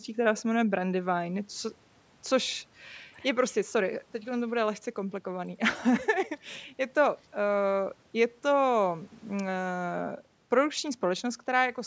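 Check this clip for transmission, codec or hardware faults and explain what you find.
No transmission, codec or hardware faults turn up in this speech clip; it has simply passed through a call's microphone processing, which trims the lowest bass and leaves nothing above 8 kHz.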